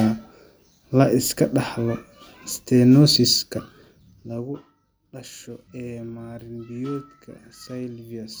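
Listening to this speech recording, nothing stood out as a technical problem.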